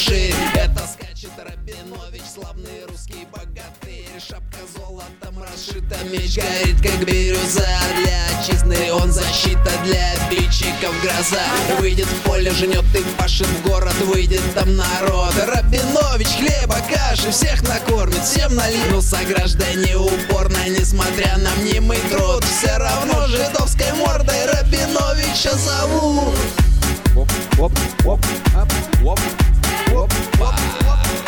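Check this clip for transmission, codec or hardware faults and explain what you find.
No faults turn up anywhere in the clip. Where the level moves, it rises and falls smoothly, as a fader would, with no steps or jumps.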